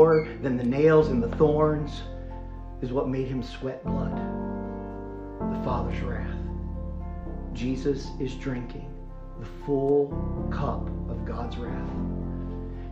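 MP3 compression runs through the whole clip, with plainly audible damage from start to finish, and this is most likely an MP3 encode. The quieter high-frequency content flickers in and out as the encoder drops weak frequency lines it cannot afford from one frame to the next. The result is a watery, swirling texture with smeared attacks, and the degree of damage fits a bitrate around 64 kbps.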